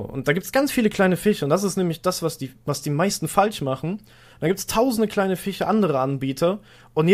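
Sample clock jitter runs throughout this speech clip: timing errors under a microsecond add a faint roughness, roughly 45 dB down, that swells on loud, bright sounds.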